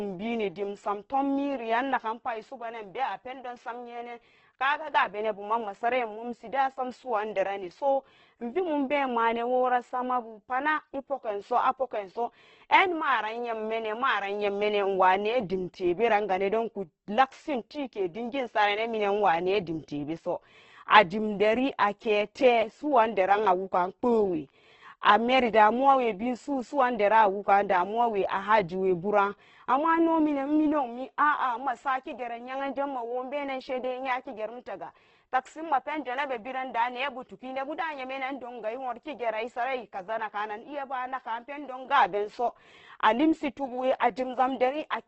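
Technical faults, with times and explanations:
Throughout: Opus compression. The speech sounds rough and grainy, with a noisy texture laid over the voice instead of clean tone, and nothing reaches above about 8.1 kHz, so the top end is cut off. The likely cause is an Opus encoder in its music (CELT) mode running short of bits. It keeps each band's energy but fills the detail by copying lower bands or with noise. The heavy damage fits a bitrate near 12 kbps in wideband.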